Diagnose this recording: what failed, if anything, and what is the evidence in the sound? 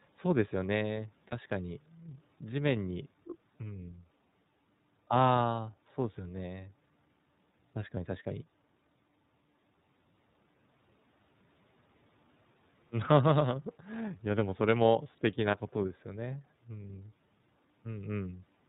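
Codec stage: the speech is band-limited to 4 kHz with a plainly audible rough, synthetic texture throughout, consistent with the iLBC codec's 30 ms frame mode.

Network stage: lost iLBC frames at 1.29–1.33 s and 15.51–15.57 s. Each is a brief buzzy, held vowel from a single concealed 30 ms frame, recovering immediately afterwards.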